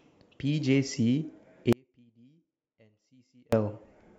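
At 1.73 s the speech drops out abruptly and stays gone until 3.53 s, an audio dropout to a faint residue lasting about 1.8 s. The gap is not silent: a faint trace of the signal remains, roughly 35 dB below its normal level. The likely cause is a brief loss of the wanted feed while the downstream path stayed live, so only a low leak passed through. Both edges are hard cuts rather than a pause or fade.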